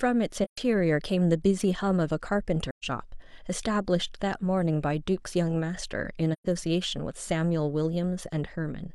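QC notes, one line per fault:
0.44–0.58 s, 2.70–2.85 s, 6.33–6.47 s: AAC frame loss with muting. Each is a soft-edged dropout of about 0.13 s, which fits three lost frames zeroed by the decoder. Overlapping windows fade the speech out and back in rather than cutting it hard.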